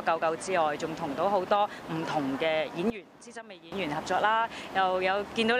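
At 2.9 s the sound and its background noise drop together by about 15 dB, recovering at 3.72 s. That's a sudden gain jump, likely an unramped digital gain step.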